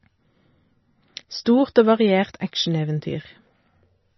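Throughout the speech, the treble stops dead near 5.9 kHz, and weak detail swirls and warbles as it flickers between frames, the heavy damage of likely MP3 compression at a low bitrate near 24 kbps. Simple low-pass filtering would dull the sound without that watery flicker.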